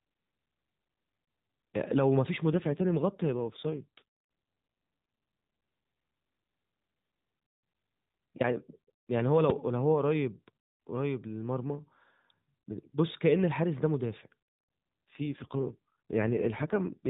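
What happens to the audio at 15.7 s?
An AMR rate drop from 15.08 s to 17.09 s cuts the codec's bit budget, consistent with a fall from 12.2 to 5.9 kbps, so the speech turns rougher and more synthetic with no gap.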